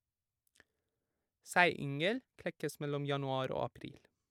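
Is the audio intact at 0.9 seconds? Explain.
Yes, the audio is intact at 0.9 seconds, with no audible fault in the speech at that moment.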